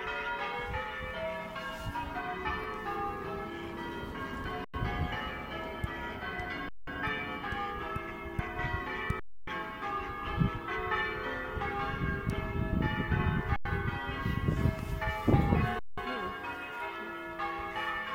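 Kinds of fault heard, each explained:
underrun with held sample: The sound stops dead five times, for 93, 186 or 279 ms, then resumes where it left off with only a soft edge. The output buffer ran empty and the converter held its last value; the lengths point to 4096-sample blocks.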